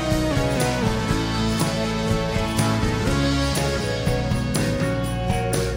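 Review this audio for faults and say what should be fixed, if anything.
No faults turn up in this audio, so nothing needs to be fixed.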